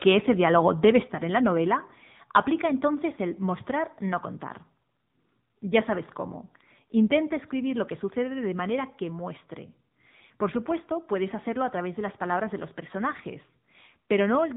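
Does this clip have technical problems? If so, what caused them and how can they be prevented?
Yes. Throughout the clip, the AMR narrowband mobile codec leaves speech buzzy and synthetic with nothing above 3.8 kHz. The plainly audible coding damage points to a low-rate mode near 8 kbps, where few pulses model each frame. Routing the call over a wideband codec or a higher AMR mode would prevent this.

From 0.84 to 0.98 s, just after "ese diálogo", microphone overload adds a harsh, crackling edge as peaks exceed the converter limit by about 3 dB, flattening a small share of the waveform. The likely cause is input gain set too high. Lowering the microphone gain to leave headroom would prevent it.

At 1.02 s, just before "en la novela", the microphone volume stepped down: voice and background drop together by about 4 dB right after the distorted peak, likely from the call software's automatic gain control reacting to the overload. 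Fixing the input level beforehand would prevent the correction.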